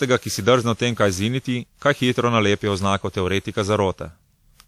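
Speech, with generation loss throughout. It sounds swirly, hollow and smeared, and attacks blur. That likely comes from about ten lossy re-encodes, fitting WMA near 96 kbit/s, with nothing above 20.1 kHz.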